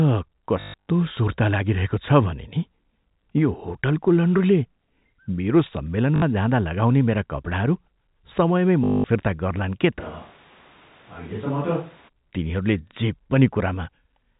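Speech, carried over G.711 telephone coding with nothing audible above 4 kHz, is marred by packet loss with the last packet repeated at 0.60–0.87 s, 6.16–6.22 s and 8.84–9.04 s. Each gap is filled by replaying the most recent packet, so the audio stutters robotically. The first event is scattered over roughly 280 ms, with a longest unbroken run of 140 ms, and the third lasts 200 ms. Those longer runs buzz at about 50 Hz, which fits 20 ms packets. From 10.01 to 12.07 s the sound turns roomy and hollow, drops about 5 dB in level, thins in the bass and gains background noise sitting roughly 25 dB below the speech, with abrupt transitions in and out. This is likely a switch to a distant microphone after the close one dropped out.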